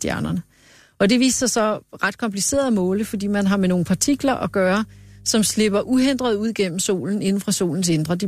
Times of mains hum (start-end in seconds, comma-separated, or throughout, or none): 2.74-6.46